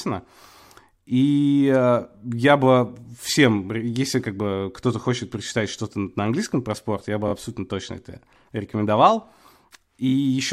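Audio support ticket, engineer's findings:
Repeated frames: one ~23 ms compressed block replayed twice more at 7.27–7.32 s, between "про спорт я бы" and "абсолютно точно это рекомендовал", and at 10.08–10.13 s. Short stutter, each adding 46 ms.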